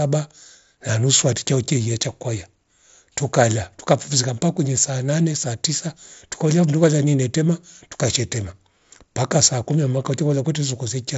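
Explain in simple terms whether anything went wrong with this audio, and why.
Nothing went wrong; no faults can be heard here.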